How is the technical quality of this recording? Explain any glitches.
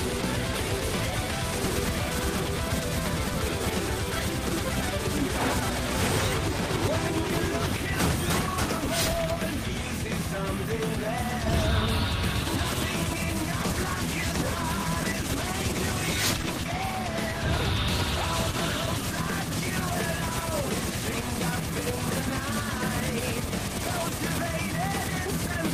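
Quality holds up except for one stretch with a call bitrate drop. From 13.59 s to 20.98 s the sound turns rough and watery, and the top end goes dull. The call's bandwidth estimate fell, so the encoder coded with far fewer bits. The sound points to a cut from about 32 kbps to about 18 kbps. It stays at its worst for about 5.8 s before clearing.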